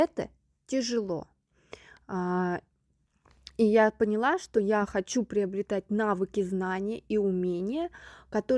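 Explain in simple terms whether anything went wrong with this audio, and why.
Nothing went wrong: the speech recording carries no technical faults anywhere in its signal.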